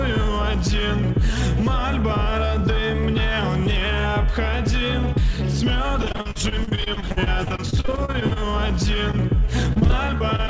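Repeated packet loss (robotic sound) runs from 6.02 to 8.55 s. Around thirty holes arrive in quick succession, the longest about 42 ms, and the receiver patches each one by extending the preceding sound. Roughly 29% of this stretch is synthetic fill, so the audio turns choppy, with pieces dropping out.

Short concealed packet loss follows at 9.11 to 9.15 s. About 20 ms of the call failed to reach the decoder in time. The gap was bridged by continuing the last sound and blending back into the real signal, which is heard as a brief smear or wobble.

Repeated packet loss (robotic sound) returns from 9.73 s to the end at 10.50 s. Nine gaps, none longer than about 26 ms, leave roughly 22% of the span concealed, bringing back the same choppy, broken texture. Throughout the clip, nothing is heard above 8 kHz, which fits a wideband call codec.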